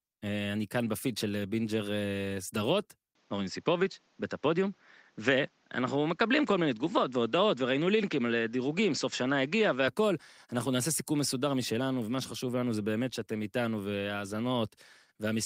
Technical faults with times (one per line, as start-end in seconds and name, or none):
3.15-9.88 input switched to a poorer device